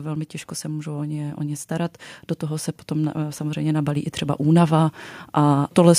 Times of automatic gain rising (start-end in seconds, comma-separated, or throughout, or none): 0.61-5.94